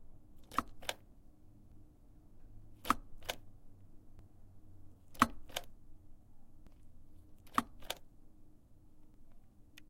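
Audio missing between chunks occurs at 1.72, 4.19, 6.67 and 9.14 s, where the sound jumps forward abruptly, as if a few tens of milliseconds were snipped out and the edges butted together with no gap. The skips come at a steady spacing of just under 2.5 s, which likely points to a recorder or processor handling the audio in 2.5 s chunks and dropping a short piece each time it closes one chunk and opens the next.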